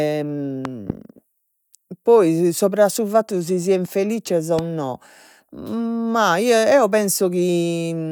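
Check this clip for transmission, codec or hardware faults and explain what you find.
Three loud pops break into the speech. Loud pop, 0.65 to 0.92 s: a pair of sharp pops, then a single pop at 4.59 to 4.61 s, just after "si sian felizzes o". The likely cause is a sudden voltage step or pulse from a plug, switch, static or driver glitch. The following circuitry shapes it into a brief thump, peaking roughly 10 dB above the speech, while the talking continues underneath.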